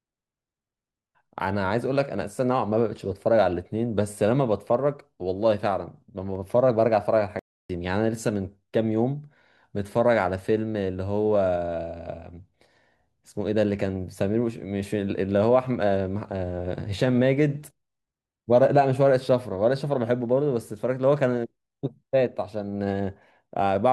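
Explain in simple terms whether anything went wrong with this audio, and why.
One thing went wrong: a playback stall. At 7.39 s the speech cuts to silence for about 0.3 seconds, then picks up again at 7.70 s. The player likely ran out of audio data or got held up for a moment before recovering.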